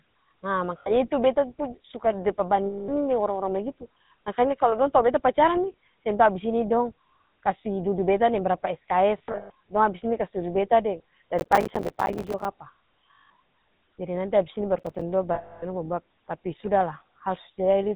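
GSM full-rate codec damage runs through the whole speech clip, consistent with 13 kbps coding. The vocal tract is modelled and driven by regularly spaced pulses, with nothing passed above 4 kHz, so every word carries a plainly audible buzzy, gravelly roughness.

Lost GSM frames first appear at 0.78 to 0.92 s, an 80 ms gap where the last good frame is repeated and the sound hangs as a rough, metallic ring. The same happens at 2.66 to 2.90 s (220 ms) and at 9.18 to 9.50 s, just after "dudu beta deng brapa". There, 220 ms of losses are scattered over about 320 ms, with the longest run near 150 ms.

Processor overload crackle then sets in from 11.39 to 12.45 s. Dozens of missed deadlines, which fits buffers of roughly 5 ms, each leave a hard-edged gap of silence, heard together as a gritty tearing over the speech.

More lost GSM frames follow at 13.15 to 13.31 s, a 160 ms metallic hold. A short second burst of processor overload crackle comes at 14.79 to 15.02 s, right after "abis ini", with around ten tiny gaps. 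The last lost-frame event, the longest at 280 ms, runs from 15.34 to 15.65 s.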